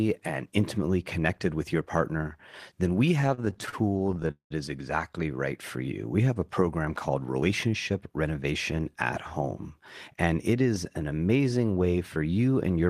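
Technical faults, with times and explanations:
3.21–4.52 s, repeated stalls (stutter): Packets arrived late or slower than playback, so the jitter buffer kept running dry. This happens about two dozen times here. Each time, the receiver stretches the last sound to cover the wait. About 469 ms is filled in this way, over a third of the span. The longest wait is 194 ms, and the filler fades there. Nothing is lost, but the audio drags and stutters.
7.42–8.26 s, jitter buffer speed-up: The buffer had built up more audio than it aims to hold. To bring the delay down, the receiver cut out many short slices, each one or a few pitch periods long. Roughly 70 ms is removed in total. Playback runs at about 107% speed while the pitch stays the same. The passage sounds hurried, and its timing pulls ahead.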